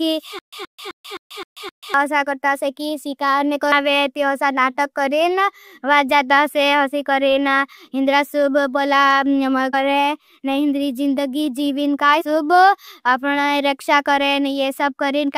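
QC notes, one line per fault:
0.39–1.94 s, stutter with silent gaps: a 124 ms fragment repeats six times every 260 ms with 136 ms of dead silence between, likely a stalled stream retrying.
3.71 s, 9.73 s and 12.20–12.22 s, compressed frames skipped: the audio jumps ahead by roughly 200 ms, 150 ms and 100 ms, multiples of 21.3 ms frames.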